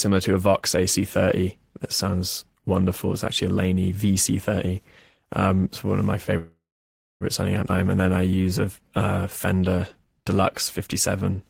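Right after "it's one of my", at 6.37 s, the audio stalls in what sounds like a call audio freeze, running until 7.24 s. The last bit of sound gets stretched out and fades, then there's about 0.6 s of plain silence before things pick up exactly where they left off. That's most likely packets getting held up in transit and the jitter buffer draining dry. Nothing's lost; it just pushes everything about 0.83 s later.

Half a second after that, at 7.69 to 7.72 s, there's a skip ahead. Playback jumps forward with almost no gap, only a few milliseconds of fill, and roughly 0.4 s of audio is gone. The two sides are stitched together nearly directly, so it comes across as an abrupt lurch. That pattern fits the receiver dumping a chunk of queued audio to claw back much of the delay the freeze just added.

Then come two stretches of jitter buffer slow-down, from 7.76 to 8.91 s and again from 9.30 to 10.38 s. 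The receiver pads things out by repeating tiny pitch-period-sized slices and bits of pause, so the sound drags at about 87% speed in the first stretch and about 89% in the second. Pitch holds, but sounds get drawn out, adding 153 ms and then 126 ms as it rebuilds a safety reserve.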